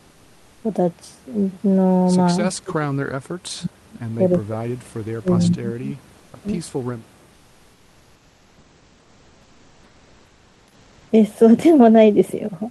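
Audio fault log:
2.5–2.91 s, 3.08–3.98 s, 4.16–6.48 s: speech suppressed in double talk. The talker's speech drops sharply, by up to about 40 dB, in pieces. Both sides were likely talking at once. The echo canceller mistook this talker for loudspeaker echo and turned it down.
6.17–6.33 s, 7.33–11.09 s: comfort noise in place of the background. In the pauses, the real room noise gives way to a steady, featureless hiss, about 2 to 3 dB quieter. The sender likely stopped transmitting during silence, which fits Opus DTX, and the receiver filled the gap with synthetic noise.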